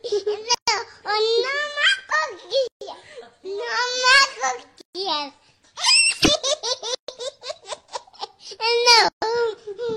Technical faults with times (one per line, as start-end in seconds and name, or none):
0.55-0.68 gap at a join of encoded pieces
2.68-2.81 gap at a join of encoded pieces
4.81-4.95 gap at a join of encoded pieces
6.95-7.08 gap at a join of encoded pieces
9.08-9.22 gap at a join of encoded pieces